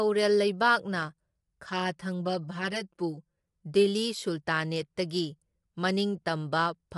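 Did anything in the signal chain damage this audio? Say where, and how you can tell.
Yes, two stages left marks. Across the whole clip the speech is rough and grainy, with noise filling the gaps between harmonics and nothing at all above about 11.6 kHz. That points to a codec stage, likely low-delay AAC compression in the AAC-ELD style used for calls. Its short frames can't resolve pitch harmonics well, and the damage is plainly audible, which fits a bitrate around 32 kbps.

The second fault is channel delay, heard as comb filtering, from 1.70 to 3.4 s. The speech goes hollow and phasey there, with fixed notches that don't move with the pitch. The pattern suggests one channel running about 5 ms late before the two are summed to mono, probably at a driver or buffer stage. Whatever is common to both cancels, starting around 100 Hz and then at evenly spaced steps up the spectrum.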